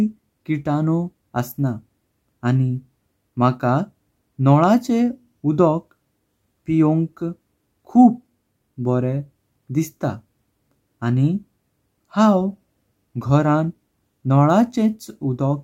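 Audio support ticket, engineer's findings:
No faults found in clip.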